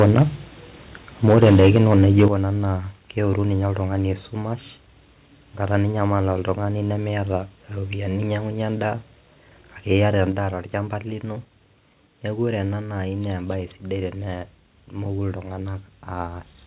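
Speech over a narrowband call line, with nothing above 4 kHz, consistent with G.711 A-law. Microphone overload flattens the peaks from 0.00 to 0.22 s and 1.28 to 2.25 s, roughly 5 to 6 dB over, with a few percent of samples clipped, likely from input gain set too hot. The microphone volume is stepped down abruptly at 1.29 s (about 2 dB), 2.28 s (about 8 dB) and 10.32 s (about 5 dB, just before "torchamba lino"), likely the call software's gain control reacting to clipping.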